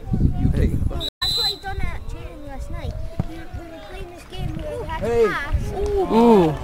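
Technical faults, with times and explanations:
1.09 to 1.23 s, stream reconnect: the sound stops for 85 ms, then a fresh decoder picks up slightly further along, skipping roughly 50 ms, and eases back in. Unlike a simple dropout, playback resumes at a later point rather than where it stopped.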